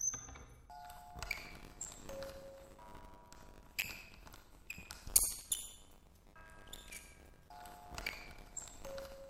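Everyday sounds here, and from 1.32 s to the end there's buffer tearing: a steady 100 Hz rattle where a small slice of each 10 ms period replays audio from about 20 ms earlier.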